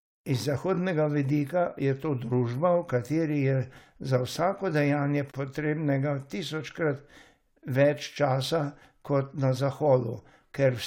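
Speech recording with no technical faults to report. Nothing in it calls for a time or a cause.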